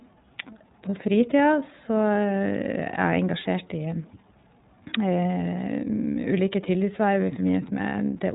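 From start to finish the speech sounds band-limited and slightly rough and synthetic, with nothing above 4 kHz and plainly audible coding damage. This is the iLBC codec at work, and the 30 ms framing fits its 13.33 kbps mode, squeezing each frame's excitation independently into a narrowband stream.

From 0.90 to 0.93 s a brief held, faintly buzzy vowel-like sound replaces the speech before the voice returns cleanly. This is a lost iLBC frame. The 30 ms gap points to a single missing frame, which the decoder concealed by repeating the last pitch cycle mixed with noise. Because each iLBC frame stands alone, recovery is immediate.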